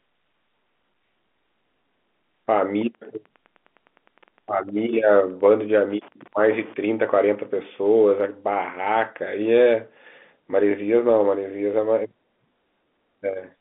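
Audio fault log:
2.89 to 8.26 s, Wi-Fi interference: a steady ticking runs under the speech at about ten ticks a second, matching a beacon period of 102.4 ms, at roughly 35 dB below the speech level. The clicks come from a nearby Wi-Fi radio whose transmit bursts are picked up and rectified by the audio circuit, turning each beacon into an audible pulse. The ticking stops at 8.26 s, while the telephone band of about 200 Hz to 3.5 kHz carries on as before.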